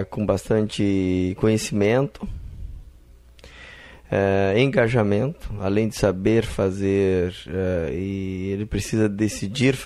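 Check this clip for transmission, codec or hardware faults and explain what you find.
Nothing in the clip points to a transmission, codec or hardware problem; the signal holds steady throughout, with no dropouts, glitches or distortion.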